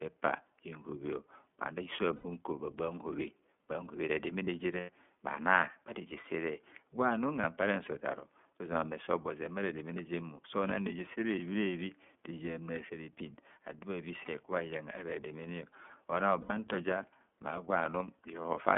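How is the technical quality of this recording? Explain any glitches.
The recording has plainly audible codec damage throughout and six brief dropouts.

The whole clip passes through the iLBC codec, a narrowband VoIP coder. The audio is confined to roughly 200 Hz to 3.5 kHz. Each 30 ms frame's excitation is coded independently, which fits the 13.33 kbps mode. That gives the speech its muffled, slightly rough, synthetic texture.

Lost iLBC frames occur at 2.16–2.26 s, 4.80–4.89 s, 7.40 s, 14.25 s, 16.41–16.51 s and 18.42 s. The longer gaps are about 90 ms and the shorter ones about 30 ms, which fits whole missing frames. The 7.40 s loss follows "bharejesere gwanum", and the 14.25 s loss precedes "bha iyangha". The decoder fills each gap by repeating the last pitch cycle with added noise, heard as a short held, buzzy vowel. The voice is right again almost at once afterward.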